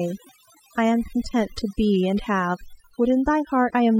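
Overdone noise removal runs throughout: an over-aggressive noise reducer cuts bands near its noise estimate, leaving near-silent, twinkling background.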